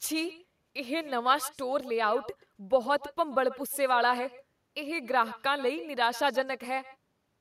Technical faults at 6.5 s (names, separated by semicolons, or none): echo with no canceller